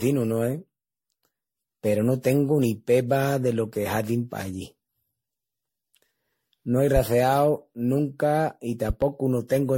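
From start to finish the speech carries a swirly, hollow smear, with consonant attacks blurred. This is generation loss, most likely from MP3 encoding repeated about ten times at rates near 64 kbit/s, each pass requantising on a shifted frame grid so errors and gaps accumulate. A spectrogram shows nothing above 16.5 kHz and a patchy, holed texture of flickering time-frequency blocks below that.

At 6.96 to 7.00 s a single loud pop lands on top of the speech, peaking a few decibels above it, while the speech continues underneath. From 8.90 to 9.06 s, just after "nunca i", come two pops in quick succession, noticeably stronger, around 10 dB above the signal. Each is likely an electrical transient such as a switch or static discharge. On the waveform they appear as narrow spikes, and on a spectrogram as thin vertical broadband stripes.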